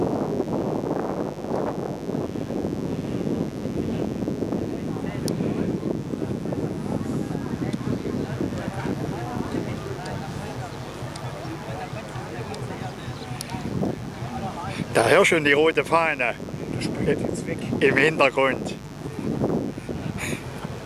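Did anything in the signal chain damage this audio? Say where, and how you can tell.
Yes. A dimmer, rectifier or unshielded lead in the analogue wiring let 50 Hz mains buzz in, a raspy, steady hum sitting about 15 dB below the signal throughout.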